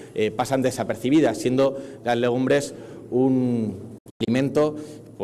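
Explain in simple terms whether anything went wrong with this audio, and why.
Between 3.98 and 4.28 s the sound drops out in several brief gaps: a digital broadcast dropout, where the receiver muted while the signal was corrupted.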